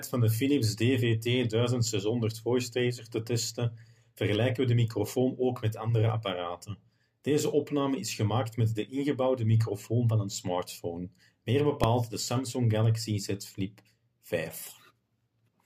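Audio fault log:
11.84 s, invalid numbers at full scale: one sharp bang where a 1.33 ms block, which fits a 64-sample buffer, jumps to maximum level after a calculation yields invalid values.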